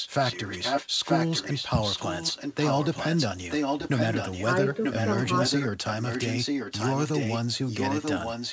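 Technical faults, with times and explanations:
0.00–0.88, 1.04–3.27, 3.50–4.45, 4.83–5.68, 5.87–7.38 and 7.67–8.53 s: echo leak. One side's echo canceller likely passed its loudspeaker pickup back, so a copy of the speech returns about 0.94 s late. It sits a little below the direct speech, and at 3.50–4.45 s it is about as loud.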